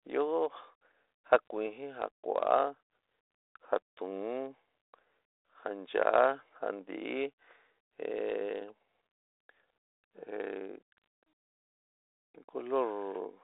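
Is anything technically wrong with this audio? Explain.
Yes. The speech shows bit errors on an ADPCM link, at 1.35 to 1.47 s and again at 10.98 s. The sound is telephone-band, roughly 300 Hz to 3.7 kHz, consistent with 32 kbit/s G.726. A flipped bit in the coded difference stream upsets the decoder's step size and predictor, so the error lingers briefly. With an error rate of a fraction of a percent, each event is a pop with a rough burst and a brief level jump.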